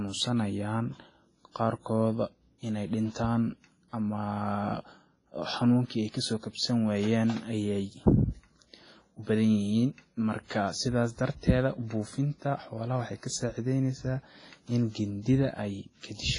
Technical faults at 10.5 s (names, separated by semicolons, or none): WMA compression; pre-echo